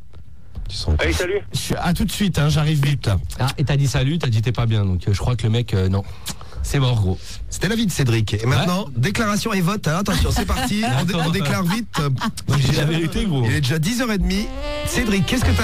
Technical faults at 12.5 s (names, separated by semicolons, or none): processor overload crackle